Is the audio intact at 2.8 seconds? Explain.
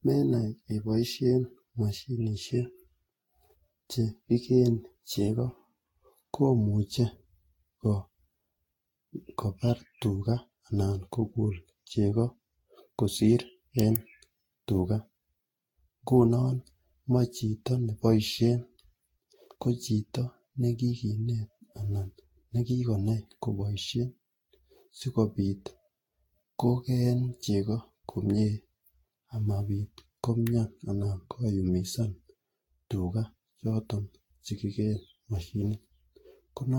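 No, not really. At 2.8 seconds, like the whole clip, the speech carries generation loss: a swirly, hollow, smeared quality with softened attacks. It's likely from repeated Vorbis re-encoding, roughly seven passes near 60 kbit/s, each adding fresh quantisation noise on a shifted frame grid.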